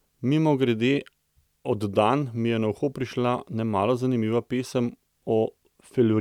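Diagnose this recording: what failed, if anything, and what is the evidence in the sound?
Nothing in the speech stood out as a fault on listening.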